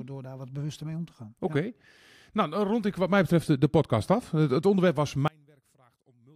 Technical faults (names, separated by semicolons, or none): one channel inverted